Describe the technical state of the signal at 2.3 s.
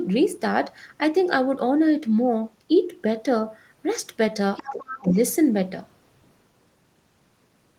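At 2.3 s the speech signal is intact, with no dropout, distortion, glitch or other technical fault.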